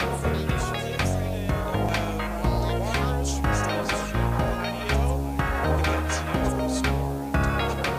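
A constant, even hiss runs through the whole clip, sitting only about 25 dB below the signal. This is low bit depth with dither: the audio is stored with just 7 bits, and dither turns the rounding error into steady white noise instead of gritty distortion that would follow the signal's level.

At 1.89 s, 3.84 s and 5.79 s the sound jumps forward abruptly, each time losing roughly a twentieth of a second with no gap of silence. The spacing of about 2 s between skips likely points to audio missing between chunks, with a piece lost at each chunk changeover. A random network dropout would instead leave silence or fill and arrive at irregular times.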